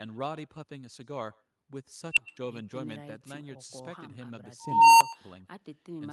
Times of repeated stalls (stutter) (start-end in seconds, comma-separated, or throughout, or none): none